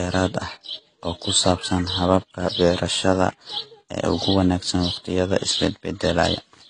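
Speech with a hard spectral ceiling near 9.8 kHz throughout, the artefacts of different codecs heard together, fitting a likely transcoding between lossy codecs, an HE-AAC-style encode re-encoded as AAC-LC. On a spectrogram, the energy stops flat at that line.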